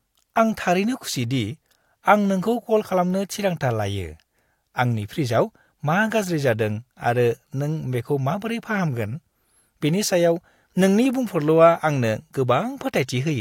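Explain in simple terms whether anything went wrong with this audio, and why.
Nothing went wrong with this audio: the speech comes through without any fault to point to.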